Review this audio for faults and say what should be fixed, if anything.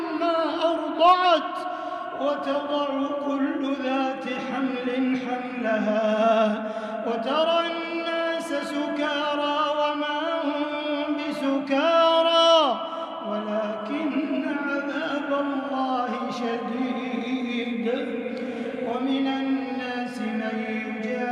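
No faults found and nothing needs fixing.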